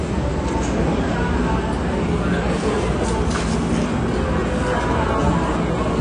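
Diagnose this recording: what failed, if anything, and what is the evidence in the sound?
Codec stage: throughout, nothing sits above 9.8 kHz and the audio smears and warbles, unlike a clean low-pass filter. This is likely AAC compression starving its quantiser at about 32 kbps.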